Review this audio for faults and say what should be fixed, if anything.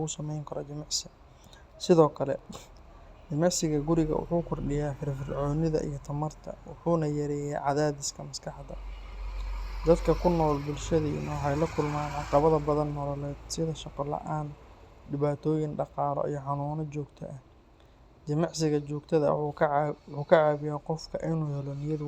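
Nothing stood out on listening, so there is nothing here that needs fixing.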